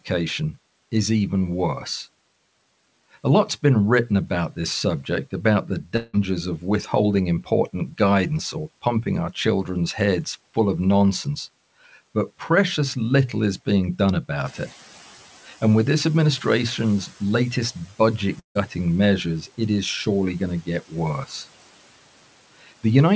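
Right after "this subject about the", at 5.96 s, the sound smears into a fading buzz for about 0.18 s before resuming at "of withholding important guidance". The missing stretch is likely a long network dropout, with the receiver padding over it. It happens again at 18.39 s, where a short buzzy fill sinks into near-silence until "measures it is surely" picks up at 18.57 s.

In between, after "little is being done", the room noise jumps by about 12 dB around 14.5 s. That's the noise suppressor catching up: the hiss comes through fairly raw, then settles by about 9 dB as the estimate adapts over 2.7 s, done by 17.19 s.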